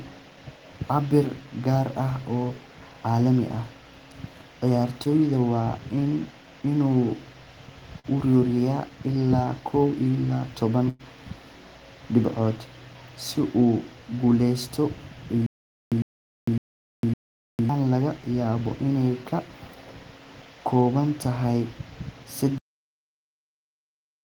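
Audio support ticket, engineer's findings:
Short concealed packet loss at 5.03–5.07 s and 7.99–8.06 s: brief smear in the speech. About 20 ms, then 40 ms, decoder-synthesised; spectrogram shows smoothed harmonics, no hard edges.

Burst of packet loss at 10.89–11.01 s: last sound held and fading out, about 100 ms concealed, speech resumes further on. Spectrogram shows a frozen, decaying spectrum and a jump at the rejoin.

Stutter with silent gaps at 15.46–17.69 s: a 104 ms fragment repeats 4 times, about 453 ms of digital silence between, 557 ms period. Likely player or stream stall re-issuing its last buffer. Waveform shows identical blocks separated by flat silent gaps.

Cut-off end at 22.58 s: speech stops mid-sound, no decay, digital silence to the end. Final buffers were never written or played. Waveform shows an abrupt drop to a flat line.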